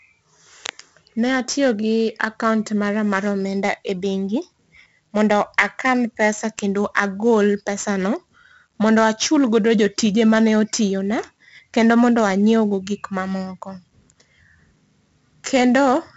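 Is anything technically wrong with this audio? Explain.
Yes. 4-bit ADPCM compression runs through the whole speech clip. Each sample is stored as a small coded step from a predicted value, and the step size has to adapt on the fly, so the coding error is a noise floor that rises and falls with the signal. Here the damage is heavy: a gritty hiss rides on every loud syllable, and sharp onsets distort where the step can't grow quickly enough. Nothing sounds above about 7.7 kHz, which dulls the speech and fits a low sample rate running at roughly 64 kbps.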